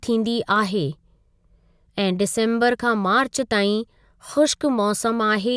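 No technical faults can be heard anywhere in the speech recording.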